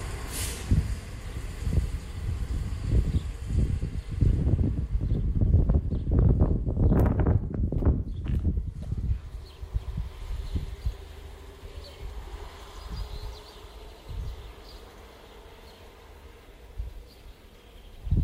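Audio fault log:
No faults heard in these sounds.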